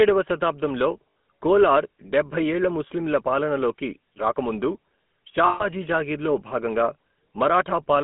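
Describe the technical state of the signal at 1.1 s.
At 1.1 s there are lost GSM frames. From 1.1 to 1.16 s, a 60 ms gap, the decoder has no good data. It repeats the settings of the last good frame. The speech turns into a short, rough, metallic ring instead of breaking to silence. The length fits three missing 20 ms frames. The gap is too brief for the ring to fade fully before normal decoding returns.

Underneath, the GSM full-rate codec is plainly audible. The sound points to the 13 kbps full-rate coder. It models the vocal tract and drives it with regularly spaced pulses, keeping only a thinned excitation. That gives the voice a buzzy, gravelly roughness. The band runs from about 200 Hz to 3.4 kHz, so the speech sounds narrow and thin.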